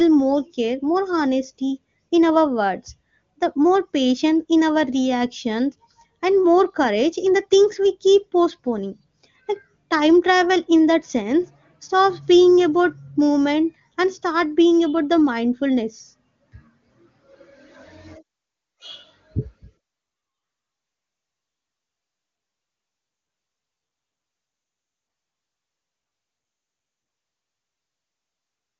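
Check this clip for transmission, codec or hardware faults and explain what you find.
Nothing stood out on listening to this speech clip, and the wideband AMR-WB coding at 23.85 kbit/s leaves the sound clear.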